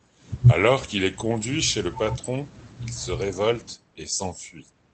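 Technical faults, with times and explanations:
No technical faults detected; the speech comes through a normal call path, coded with Opus at 24 kbps and band-limited to 8 kHz.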